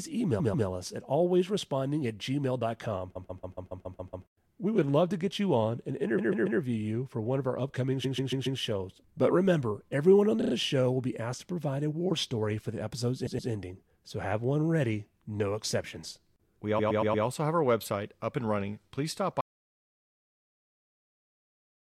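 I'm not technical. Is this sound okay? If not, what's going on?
No. The speech has two problems.

Repeated frames: the same short slice of sound, usually about 0.14 s long, plays again several times in a row, so the audio stutters. This happens at 0.39–0.67 s (just before "us at alwaysresponding at"), 3.15–4.26 s (eight extra repeats, adding about 1.1 s), 6.17–6.59 s (between "get you on and" and "you for one of"), 8.03–8.59 s, 10.41–10.52 s (between "remember everyone on" and "show will be asked"), 13.26–13.50 s and 16.78–17.24 s.

Audio dropout to silence: at 19.41 s the sound cuts out to total silence, with no background noise, and stays silent to the end. The likely cause is that the input was lost while recording continued, so anything said after that point is missing.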